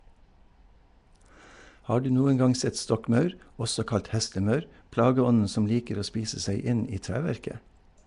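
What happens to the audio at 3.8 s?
At 3.8 s the speech has a rough, hissy halo and a smeared, underwater quality, and this runs through the whole clip. Nothing is heard above 10.6 kHz. The likely cause is Nellymoser compression, which codes short blocks at two bits a sample and fills starved bands with noise.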